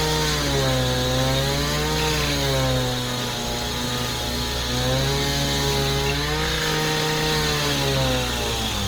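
Throughout, the sound has a rough, grainy, noisy texture with full bandwidth kept, which points to likely Opus compression in music mode at a low bitrate near 24 kbps.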